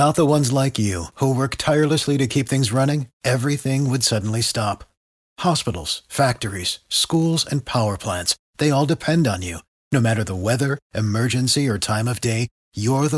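Resampler restarted on every block, throughout the clip: each 10 ms block was converted from 48 kHz to 24 kHz in isolation, so the converter lacked its true neighbours at every edge. Those edge errors recur at 100 Hz, heard as a buzz under the speech.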